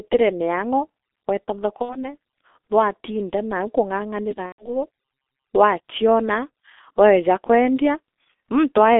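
The whole clip of speech sounds muffled, hoarse and thin, with smeared consonants and nothing above about 3.6 kHz or below 250 Hz. This is heavy G.723.1 codec damage: a low-rate telephony coder at 6.3 kbit/s working in 30 ms frames updates its model of the voice too slowly to keep detail. From 1.82 to 2.06 s, just after "miang’o weeta", the speech smears into a fading stretched sound and stays weak for a moment. The same thing happens from 4.46 to 4.71 s, but here the sound is muted from the third lost frame on. This is VoIP packet loss concealed by the speech codec. About 60 ms and then 120 ms of audio went missing, which fits two and then four lost frames. The decoder filled each gap by repeating its last pitch and filter at falling gain, and recovered slowly afterwards.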